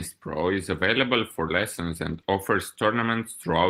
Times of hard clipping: none

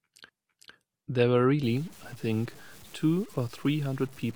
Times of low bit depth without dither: 1.63-4.36

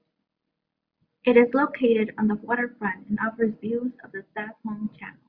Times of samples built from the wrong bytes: none

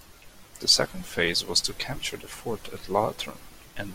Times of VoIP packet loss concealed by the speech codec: none

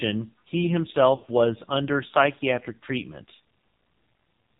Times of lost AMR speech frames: 1.16-1.26

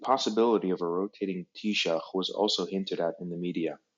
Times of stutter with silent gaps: none

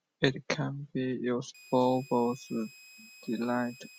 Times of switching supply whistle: 1.54-3.98

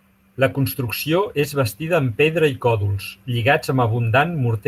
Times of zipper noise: none

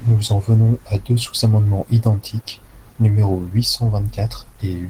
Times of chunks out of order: none

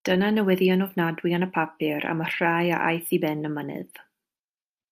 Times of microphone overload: none

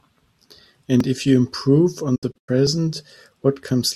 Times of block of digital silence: 1.00

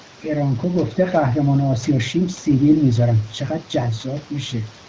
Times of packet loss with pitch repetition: none

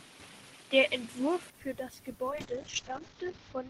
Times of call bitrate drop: 2.31-3.69

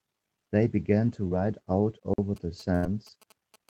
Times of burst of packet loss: 2.75-2.86

